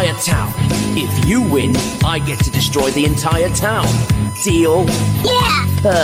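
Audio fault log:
Throughout: USB whine. A steady tone sits at 1 kHz, about 15 dB below the sound, and holds a fixed pitch. The USB bus draws current in 1 ms frames. That pulsing leaks into the audio through the power or ground and repeats a thousand times a second.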